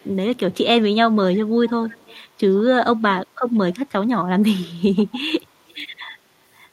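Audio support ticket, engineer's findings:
Echo leak at 0.0–0.14, 0.36–0.57, 1.88–2.21, 3.72–3.76, 4.96–5.15, 5.71–5.75 s: faint repeat of speech 131 ms late, roughly 25–40 dB down. Likely far-end echo canceller passing loudspeaker pickup back.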